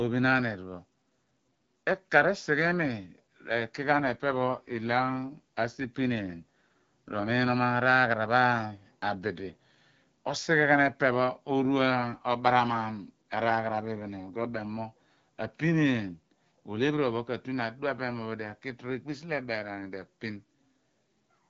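AMR rate drop at 3.92 to 7.58 s and again at 13.50 to 14.68 s in this wideband speech: the voice turns rougher and more synthetic with no gap or band change, which fits the codec stepping down from 12.65 to 8.85 kbit/s over a weak radio link.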